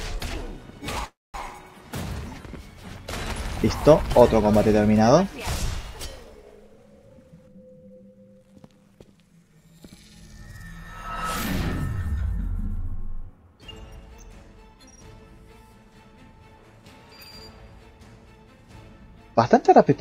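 At 1.05–1.36 s a call audio freeze, likely from delayed packets draining the jitter buffer, leaves a fading buzz then about 210 ms of flat waveform before the audio resumes intact. From 7.06 to 8.84 s a jitter buffer speed-up trims pitch-period slices, running about 116% speed at unchanged pitch; the spectrogram compresses horizontally, dropping roughly a third of a second.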